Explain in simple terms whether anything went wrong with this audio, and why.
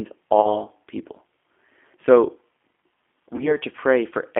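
G.729 codec, throughout the clip: the speech has passed through a low-bitrate phone codec that rebuilds the voice from a rough model of the throat and mouth plus a few pulses, rather than sending the actual sound. Anything above about 3.5 kHz and below about 250 Hz is gone, so the voice sounds narrow, like an old phone line, with a noticeably rough, slightly synthetic edge.

VoIP packet loss concealed by the speech codec, at 0.41 to 0.67 s and again at 3.36 to 3.57 s: each time, about 30 ms of audio went missing in transit, which fits a single lost packet. The decoder filled the gap by stretching the last bit of voice it had, so the sound briefly turns into a stretched, fading tone or noise. Because each rebuilt moment depends on the previous one, the distortion lingers well beyond the 30 ms gap before clearing.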